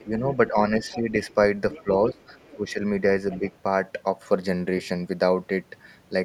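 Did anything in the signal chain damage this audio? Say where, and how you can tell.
Yes. The damage is in call processing. Speech suppressed in double talk: the speech dips by about 10 dB during 0.0 to 1.13 s, 1.83 to 2.17 s and 2.55 to 2.82 s. A second voice overlaps the first two dips. An echo canceller likely turned down both talkers at once.

The other side's voice leaks through at 0.89 to 0.99 s, 1.71 to 2.55 s and 3.31 to 3.51 s. It sits about 20 dB below the speech. The loudspeaker signal likely reached the microphone, and echo cancellation did not fully remove it.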